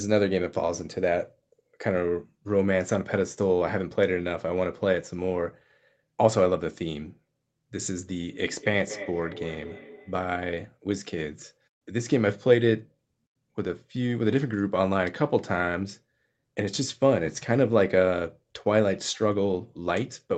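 From 8.26 to 10.47 s a feedback echo between two devices: another device replays the sound, the first device's microphone catches it again, and each syllable returns about a fifth of a second later, about 14 dB down and ringing. Spectrograms show evenly spaced trailing copies.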